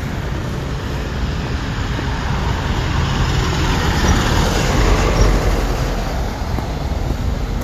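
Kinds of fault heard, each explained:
No fault of any kind turns up here; the sound just runs along without a hitch.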